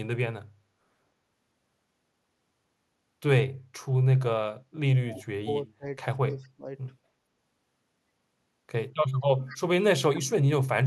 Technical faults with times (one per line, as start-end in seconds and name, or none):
5.09-5.24 echo leak
5.09-5.24 speech suppressed in double talk
5.66-5.86 speech suppressed in double talk
6.26-6.67 speech suppressed in double talk
9.48-9.58 echo leak